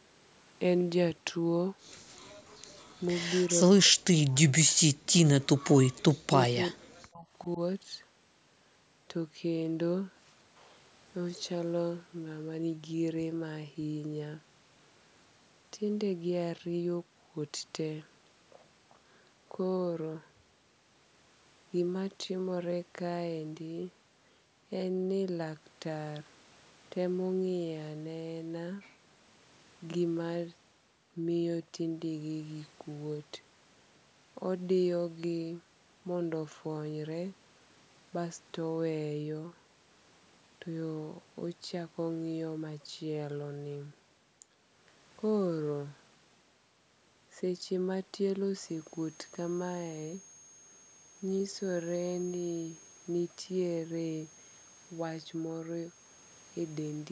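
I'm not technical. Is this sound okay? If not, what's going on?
No. The speech drops out or goes faint from 3.65 to 5.05 s, 6.21 to 7.27 s and briefly at 7.43 to 7.59 s, likely speech suppressed in double talk when both sides spoke at once.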